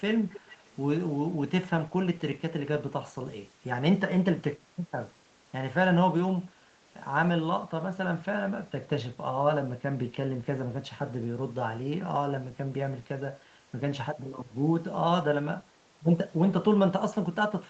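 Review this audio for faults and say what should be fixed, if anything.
The loudspeaker side's echo canceller likely missed its own pickup, so an echo leak from 0.32 to 0.76 s repeats the speech 339 ms late, about 20 dB down. To prevent it, have that side use headphones or an echo canceller that adapts faster, so loudspeaker sound is removed before it is sent back.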